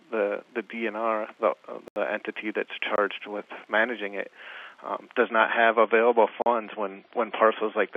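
At 1.88 to 1.96 s the sound drops into a block of digital silence, an 80 ms hole. It happens again at 2.96 to 2.98 s for 20 ms. The output buffer likely went unfilled, so samples became zeros.

From 5.22 s to the end, the adaptive stream switches to a lower bitrate, which fits a step down from 128 to 24 kbit/s MP3. The treble vanishes above 5.6 kHz. Artefacts grow. The change is abrupt, with no gap.

Inside that stretch, at 6.42 to 6.46 s, another 40 ms block of silence cuts in.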